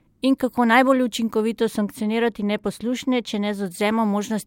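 From 1.59 to 3.66 s the speech goes dull and muffled: de-emphasis applied wrongly, a treble cut sloping down to about 8 dB lower at 10 kHz.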